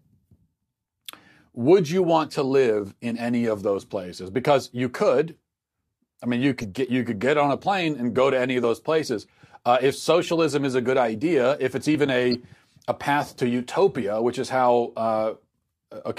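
At 6.61 to 6.64 s, between "I mean you" and "get you could get", a corrupt frame decoded produces a brief squeak in the speech. Damaged bits in a single compressed frame were decoded anyway, so misread gains placed energy at the wrong frequencies for about that frame's length, peaking around -25 dBFS. A spectrogram would show a short, sharp-edged block of stray energy unrelated to the surrounding speech.

At 8.64 s, between "go to any of" and "those places", there is a small jump in the speech. The same happens at 11.95 s, just after "good idea if it's". In each case roughly 10 ms of audio vanishes with no gap, which points to a likely dropped buffer (overrun): samples weren't collected before the hardware overwrote them. The waveform would show an abrupt discontinuity, and the spectrogram a thin vertical line.

At 12.31 to 12.35 s, a second corrupt frame decoded spans about two frames and is louder, around -15 dBFS. 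It is heard as a louder blip, with misplaced spectral energy covering about 34 ms.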